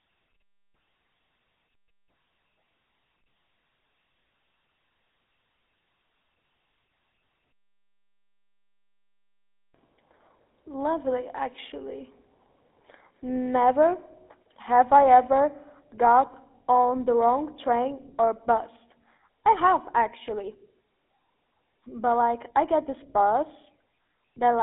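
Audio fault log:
throughout, GSM full-rate codec: buzzy, gravelly roughness on the speech with nothing above 3.8 kHz, from a 13 kbps vocal-tract model driven by sparse pulse excitation.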